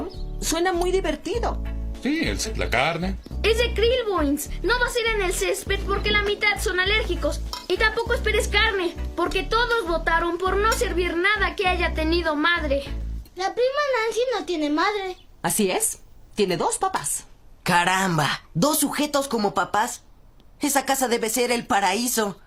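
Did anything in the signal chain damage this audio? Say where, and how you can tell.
Yes. A skip ahead at 2.45 to 2.47 s is a network and jitter-buffer fault. The sound jumps forward with no gap and no fill, so roughly 0.4 s of material simply never plays, and the two sides of the cut butt together almost seamlessly. A stretch of packets was lost in transit or discarded when the buffer overflowed while later audio was already queued, so playback resumed from the newer audio and the delay dropped by about the same amount.

A jitter buffer speed-up runs from 3.88 to 4.26 s, again at the receiver's buffer stage. Over that stretch the sound plays at 109% of normal speed while its pitch stays put, giving a briefly hurried, compressed feel. The buffer was holding more than its target, so the receiver trimmed tiny pitch-period-sized slices in quick succession, a few tens of milliseconds in total, to pull the latency back down without a pitch shift.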